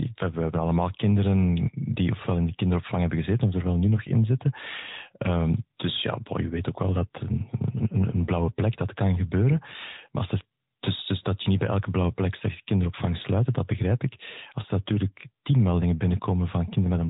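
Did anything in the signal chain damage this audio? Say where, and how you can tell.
Yes. The AMR narrowband mobile codec damaged this speech at the codec stage, across the whole clip. Nothing reaches above about 3.8 kHz, so the speech sounds boxed in and telephone-like, lacking its upper sibilance and air. The coder models the vocal tract and excites it with a handful of pulses per short subframe, and the plainly audible buzzy, synthetic edge on the speech fits a mid-rate AMR-NB mode of around 10 kbps.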